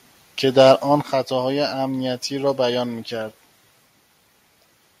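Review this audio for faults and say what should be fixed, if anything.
Between 0.59 and 0.72 s the loudest speech turns harsh and crackly, its peaks flattened, which is likely microphone overload, pushing the converter about 3 dB past its limit on a small fraction of samples. Keep input gain low enough that peaks retain headroom.

At 1.02 s the speech and background drop abruptly by about 6 dB in one step, likely the microphone volume being stepped down by the call software reacting to that clipping. Set the input level manually and turn off automatic microphone adjustment.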